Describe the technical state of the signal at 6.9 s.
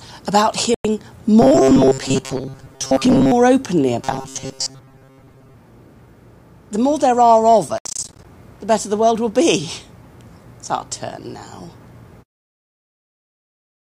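At 6.9 s the signal is intact, with no audible fault at that moment.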